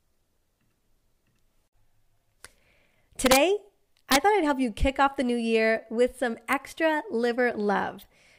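Violent cracks, sharper than clipping, hit the speech at 3.26–3.37 s, at 4.12–4.16 s before "thought I'd help you", and at 6.53 s after "new year with some". This is integer overflow: peaks driven up to about 4 dB past the integer limit wrap to the opposite sign instead of being limited.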